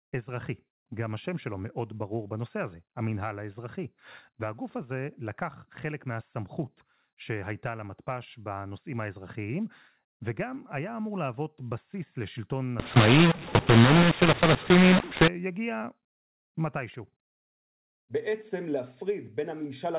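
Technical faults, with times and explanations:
12.80–15.28 s, mu-law and A-law mixed up: the speech, carried as G.711 mu-law with nothing above 4 kHz (consistent with 8,000 samples a second), turns harsh and gritty because its mu-law bytes are decoded with the A-law table, so sample levels get remapped wrongly and the quietest ones jump well above silence. On a waveform the envelope looks jagged and the gaps fill in; a spectrogram shows broadband hiss smeared up to 4 kHz, including through pauses.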